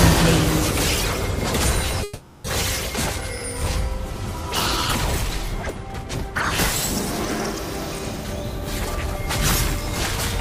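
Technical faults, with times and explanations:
2.03–2.46 s, call audio freeze: the sound stalls into a fading buzz for about 410 ms, likely packets held up and the jitter buffer running dry; nothing lost.
8.24–8.97 s, jitter buffer speed-up: audio hurries at unchanged pitch, running 7% fast as roughly 50 ms of pitch-period slices are trimmed to shrink buffered delay.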